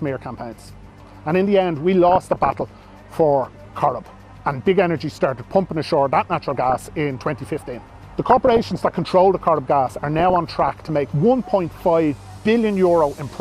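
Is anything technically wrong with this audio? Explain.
Yes. DAB burbling occurs four times, at 2.09 to 2.84 s, 6.21 to 6.87 s, 8.30 to 9.00 s and 9.90 to 10.89 s. Weak reception let bit errors, on the order of 0.4 percent to one percent, slip past error correction into the MP2 data. Corrupted samples put short blips of noise into individual sub-bands, and corrupted scale factors make sub-bands leap in level for up to a frame, so the sound gains short noisy blips and sudden jumps in level within single bands.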